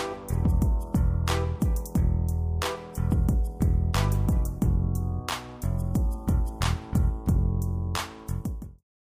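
No technical faults can be heard in the signal, and the level eases down in a smooth fade-out beginning around 8 s and ending at 8.84 s.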